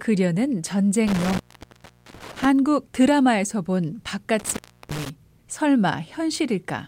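A loose connection in the signal path opened twice, an intermittent contact fault. From 1.07 to 2.45 s the speech drops out for about 770 ms in total, and from 4.39 to 5.10 s for about 330 ms. Each time the contact breaks and remakes, crackle marks the edges of the gap. While the line is open the speech vanishes and only a faint hiss remains, until the contact closes again.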